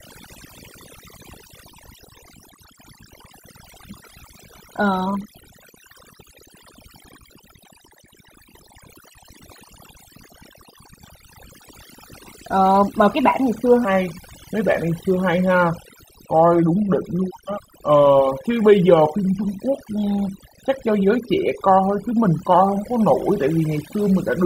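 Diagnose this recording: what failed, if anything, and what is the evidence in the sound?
Overdone noise removal at the call-processing stage runs through the whole recording. The background between phrases drops to near silence, broken by twinkling specks. The suppressor is pulling individual frequency bands down whenever they come near its noise estimate, so quieter speech detail vanishes with the hiss. A spectrogram shows dark holes in the harmonics and isolated bins flickering on and off as scattered dots. The waveform sits on an unnaturally flat floor between phrases.

From 13.85 s to the end there is a section at the wrong speed. It plays at 0.801 times the original rate, so pitch falls by about four semitones and the speech turns slow and deep. Speed and pitch shift together, which likely means that stretch was played back or resampled against the wrong clock. On a spectrogram the harmonics and formant bands step down abruptly at 13.85 s. 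The waveform's syllable envelopes spread out about a quarter wider.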